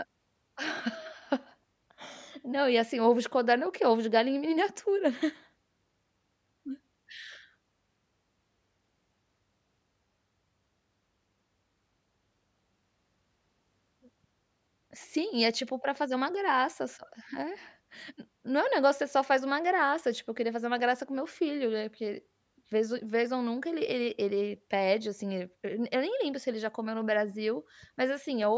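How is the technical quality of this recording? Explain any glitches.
No technical faults are audible.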